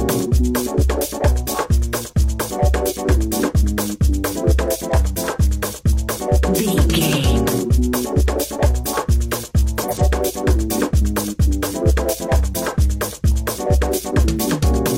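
The audio has a frames-out-of-order fault from 9.81 to 10.01 s: two adjacent blocks of about 85 ms each play swapped, which fits two-frame runs. The stretch sounds like a garbled flutter, and no time is lost.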